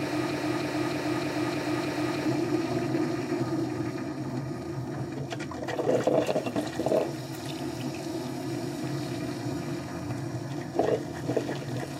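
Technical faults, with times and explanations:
0.00–2.25 s, broken-record loop: The clip opens with the loop already under way. A fragment of about 0.31 s plays six times in a row, each pass identical, with no variation between repeats. That exact repetition is the mark of a stall. The player or stream likely froze and kept re-sending the last piece of sound it held. Whatever should have filled these first two seconds is missing. Normal sound resumes once the loop ends.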